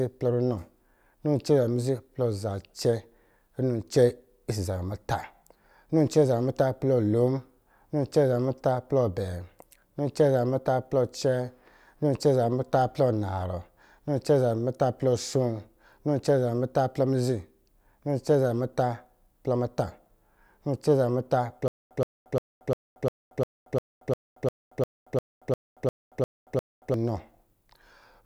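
From 21.68 to 26.94 s, a stutter with silent gaps: a 122 ms fragment loops 15 times between 229 ms silences, likely a stalled stream losing that audio.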